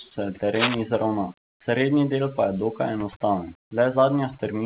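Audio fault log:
throughout: overdone noise removal. The background drops and breaks up into twinkling specks. A noise reducer set too hard pushed single frequency bands near its noise estimate far down or off. Quiet speech went with them.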